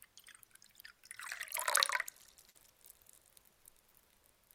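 At 2.49 s a burst of packet loss cuts into the sound, lasting until about 2.56 s. A run of audio never arrived in time, so the receiver extended the last thing it had for roughly 51 ms, letting it fade, before jumping ahead with about 60 ms of material simply gone. On a spectrogram this shows as a smeared, decaying copy of the preceding texture, then an abrupt resumption; the waveform shrinks smoothly before snapping back.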